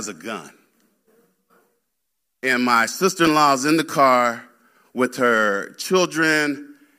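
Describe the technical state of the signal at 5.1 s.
A short, harsh chirp of misplaced noise cuts into the speech from 5.05 to 5.08 s, peaking fairly loud at around -15 dBFS. This is a corrupt frame decoded: bit errors hit a couple of compressed frames, and the decoder played their misread gains and codes as energy at wrong frequencies.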